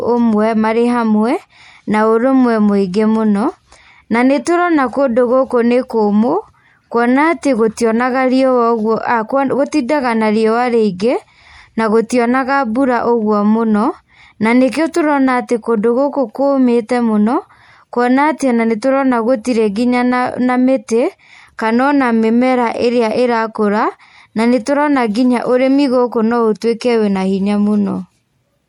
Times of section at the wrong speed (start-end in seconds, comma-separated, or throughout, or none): none